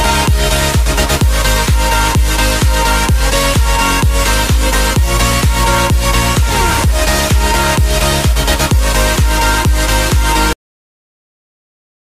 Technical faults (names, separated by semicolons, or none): cut-off end